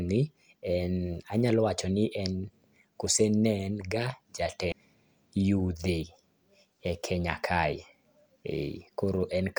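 Damaged data in a compressed stream hits twice: the decoder misreads corrupted frames, loses sync and hunts for the next frame header. The speech breaks into a short blip at 4.72 s, then a longer break from 7.70 to 7.73 s.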